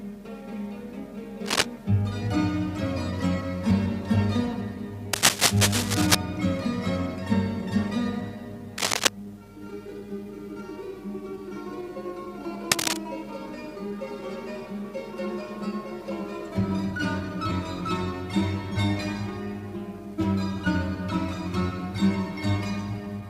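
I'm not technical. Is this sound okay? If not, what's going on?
No. There is cable scratch noise: brief, uneven scratchy rustling, louder than the sound itself, at 1.45–1.66, 5.13–6.15, 8.78–9.08 and 12.71–12.99 seconds. Unlike steady hiss or single clicks, it comes in rough bursts, likely from a worn cable or plug being moved.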